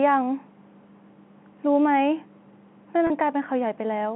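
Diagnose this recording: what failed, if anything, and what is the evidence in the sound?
The network dropped audio at 3.07 s, and the receiver patched it with packet loss concealment using pitch repetition. Through about 3.10 s you get a brief held, slightly buzzy stretch where the last pitch period loops to fill the 30 ms hole, which fits three 10 ms packets going missing. The gap is short, so it never fades to silence. The 150 to 3400 Hz telephone band from the G.711 line carries straight through the patch.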